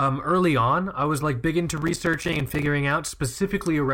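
From 1.77 to 2.66 s the processor falls behind and repeatedly misses its deadlines for audio buffers of around 5 ms each, a processor overload crackle. Roughly thirty of those short buffers go unfilled across that stretch, and each one drops to silence with abrupt edges. Strung together, the gaps sound like a gritty, tearing crackle laid over the speech, and it clears once the overload ends at 2.66 s.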